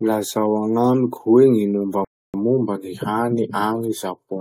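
At 2.05 s the speech stops dead for about 0.29 s, a rebuffering stall: playback ran dry awaiting data, then resumed exactly where it halted, adding time without losing any.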